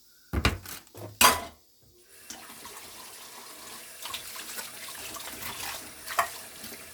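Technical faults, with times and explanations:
No technical fault can be heard anywhere in the recording: the signal stays continuous, with no interruptions, distortion or added noise.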